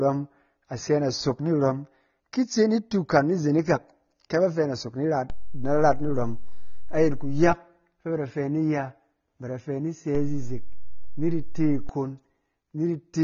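Throughout the speech, a dull, smeared, warbling texture and nothing above 6.9 kHz point to AAC compression, likely AAC-LC at a bitrate around 24 kbps, not a simple low-pass filter. From 5.30 to 7.53 s, just before "fɛ ba da fɛ", and again from 10.15 to 11.89 s, just after "ba da fɛ ni", a DC step shifts the waveform's zero line. Unlike a dropout, it is heard only as a low thump at each shift, and the speech continues unchanged.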